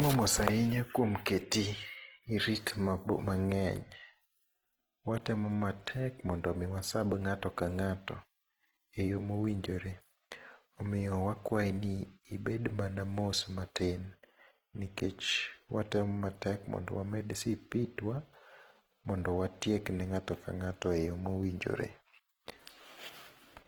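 From start to finish the speech carries Opus compression damage that is plainly audible: a rough, grainy texture where tonal detail turns noisy, with little of the swirling MP3 produces. This is likely low-bitrate Opus in its music (CELT) mode, around 16 kbps, refilling starved bands with folded or noise-like energy instead of leaving gaps. A spectrogram shows few holes but blurred, noisy harmonics, with content reaching about 20.2 kHz and nothing above.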